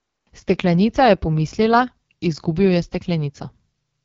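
Throughout the speech, the AMR wideband (HD Voice) codec leaves plainly audible damage. The vocal tract model is being fed too few bits to track the pulses driving it, so the sound turns rough and raspy. That points to one of the lowest rates, consistent with about 8.85 kbit/s. On a spectrogram, harmonics look smeared and grainy, the 6.4 to 7 kHz band shows diffuse noise rather than structure, and nothing appears above 7.4 kHz.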